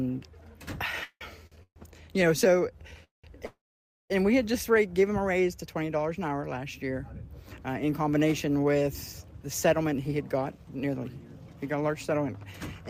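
From 1.03 to 1.78 s, repeated stalls (stutter): the jitter buffer emptied four times, stretching the last sound to fill 364 ms (longest gap 173 ms), so the audio drags.

At 3.04 to 3.26 s and 3.46 to 4.12 s, call audio freezes: the sound is held, then fades to silence for 140 ms and 520 ms, likely from delayed packets, before resuming where it stopped.

From 9.84 to 11.05 s and 11.53 to 12.27 s, jitter buffer speed-up: short pitch-period slices are cut, running the audio at 108% with unchanged pitch and trimming around a tenth of a second, then somewhat less.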